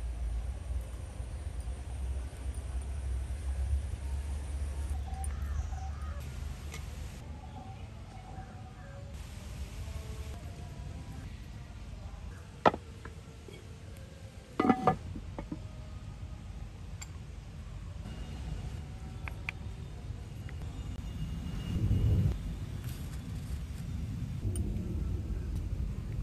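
From 20.98 s to the end at 26.23 s, the audio picks up a gritty, inharmonic fizz from crude rate conversion. Samples were simply repeated rather than filtered, fitting a 32 kHz to 44.1 kHz change. The error sits roughly 30 dB below the signal and tracks loud, bright moments, unlike steady hiss or warbling codec swirl.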